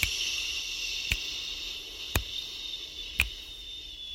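At 1.94 s there is a lost LE Audio frame: a 10 ms gap, consistent with a single dropped Bluetooth LE Audio frame. The LC3 decoder covers it by repeating the previous spectrum with randomised signs, so a short noisy patch replaces the sound. The light lossy compression across the clip is at working level.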